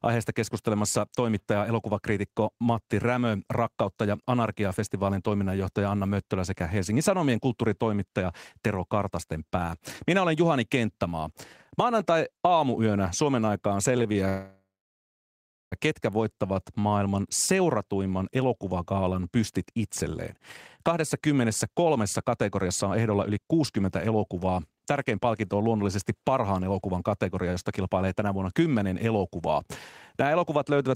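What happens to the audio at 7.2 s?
Nothing goes wrong at 7.2 s; the speech passes through that moment intact, with no dropout, click or distortion.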